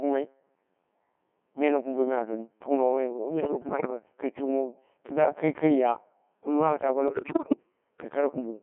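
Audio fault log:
Throughout: Codec 2 vocoder, heavy damage. The speech is rebuilt from sine waves at what sounds like 1.6 kbit/s, so it comes out robotic and buzzy, squeezed into roughly 150 Hz to 3.4 kHz.
3.41–3.90 s: bit errors on digital voice radio, just before "kai tukuno kɨdda kai". Flipped bits corrupt whole frames, so pitch, level and tone colour jump around.
7.08–7.56 s: bit errors on digital voice radio, right after "taa bo". Here the error rate is much heavier, around 30 percent, so it falls apart into warbles and robotic gibberish.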